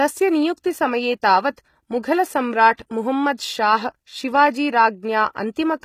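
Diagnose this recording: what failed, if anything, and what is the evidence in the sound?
HE-AAC compression, throughout: a codec-stage fault. The treble is rebuilt from copied lower bands, so sibilants sound gritty and metallic, which fits a low bitrate near 20 kbps, likely.

Pre-echo at 0.57 s and from 2.77 to 2.79 s: also at the codec stage. Quantisation noise spreads about 12 and 21 ms ahead of sharp attacks, smearing them with short hiss.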